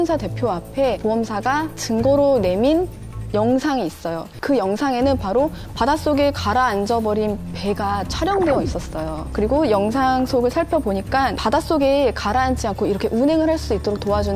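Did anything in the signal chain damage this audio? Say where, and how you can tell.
No, nothing in the signal chain has damaged this audio; it stays continuous and intact throughout, with no disruption traceable to any stage.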